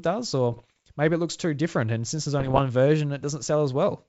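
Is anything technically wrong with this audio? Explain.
Yes. The speech has two bursts of bit errors on an ADPCM link, from 0.52 to 0.77 s, just before "maybe it looks too", and from 2.40 to 2.63 s, just after "since there's". The link sounds like G.722 wideband coding. At an error rate of around one percent, each flipped bit corrupts the decoder's step size and predictor, so the error keeps ringing for several milliseconds. It is heard as clustered pops and rough, gritty bursts with brief jumps in level.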